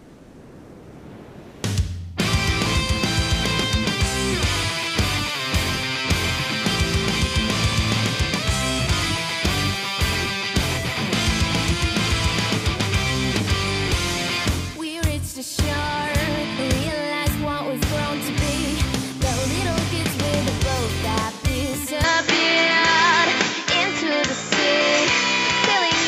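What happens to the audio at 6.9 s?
Nothing goes wrong at 6.9 s; the audio runs through that moment intact, with no dropout, click or other fault.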